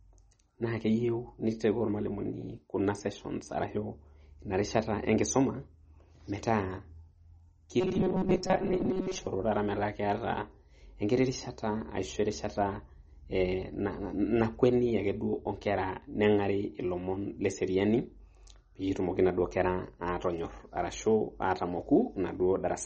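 Throughout the recording, an encoder that was likely starved of bits has applied heavy MP3 compression, and the damage is plainly audible. Nothing survives above 8.4 kHz, which fits a low bitrate of around 32 kbps, so the speech loses its air and its s sounds turn dull. Weak frequency lines are dropped and restored from frame to frame, giving the sound a watery, swirling quality and softening the edges of consonants.

From 7.80 s to 9.26 s, just before "tata metaa", the playback software likely received new audio too seldom and filled the gaps by looping the most recent short buffer. This is robotic sound from repeated short buffers. About half of the passage is repeated material. The repetition imposes a steady buzz at 188 Hz, which points to a loop roughly 5.3 ms long. The speech becomes a rigid, metallic drone that still loosely follows the rhythm of the original.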